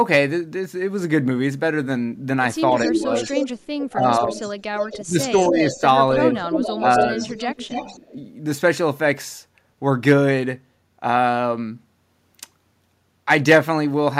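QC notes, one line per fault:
2.76–8.0 s, echo leak: a delayed copy of the speech rides along under the live talker, trailing it by 274 ms and sitting only a little below it. The likely cause is a speakerphone at the far end whose echo canceller didn't fully scrub what its mic picked up from the loudspeaker, so that leftover got sent straight back down the line.
2.86–3.09 s, 3.93–4.44 s, 4.97–7.19 s and 8.12–8.16 s, speech suppressed in double talk: the talker's level dips while the other side is also talking, with the clip's four dips ranging from a brief 40 ms blip at 8.12 s to several hundred milliseconds within the 4.97–7.19 s stretch, where it pulls down hardest, around 15 dB. The canceller likely couldn't tell near speech from echo while both were present and ducked everything together.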